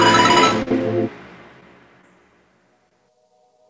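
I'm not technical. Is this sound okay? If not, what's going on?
No. There are two kinds of hiccup, both typical of an internet call.

A short stall from a late packet happens at 0.63 to 0.69 s and again at 2.89 to 2.93 s. A piece of the sound arrived late, so the receiver held the last sound a moment too long, then carried on where it left off. Nothing is lost; it just drags briefly.

Short concealed packet loss happens at 0.69 to 0.72 s, right after the first stall, and again at 1.60 to 1.63 s and 2.01 to 2.05 s. Here a sliver of sound never arrived at all, and the receiver papered over the gap with a guess. That leaves a quick smear or wobble where something is actually missing, unlike the stall's held-on sound.

The call line itself also trims off the very highest frequencies.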